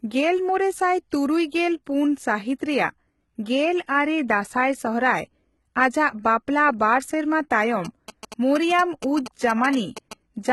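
Throughout, likely HE-AAC compression at what fits roughly 16 kbps rebuilds the treble from copied lower bands, leaving heavy codec damage and nothing above 11.8 kHz. From 7.85 to 10.13 s, the audio circuit rectifies a nearby 2G phone's GSM signalling bursts, a galloping dit-dit-dit of 217 Hz buzzes roughly 10 dB below the speech.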